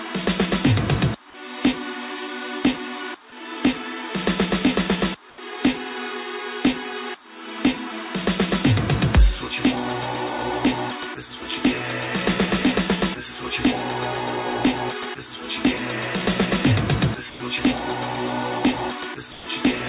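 Comfort noise in place of the background at 5.3 to 5.38 s: for 80 ms the real background, sitting about 22 dB below the loud parts, is replaced by steady, featureless noise about 6 dB quieter. This is likely discontinuous transmission, with the sender pausing and the receiver filling the gap with synthetic noise.

Sound dropped by the voice detector at 17.3 to 17.4 s and 19.32 to 19.46 s: a quiet stretch was likely judged to be background and not sent. About 80 ms and then 90 ms of sound give way to flat noise before the audio resumes. Throughout the clip, nothing is heard above 4 kHz, which fits a G.711 call codec.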